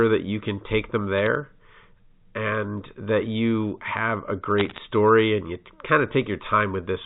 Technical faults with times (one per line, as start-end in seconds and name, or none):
1.18-1.27 bit errors on a digital phone line
4.58-4.78 bit errors on a digital phone line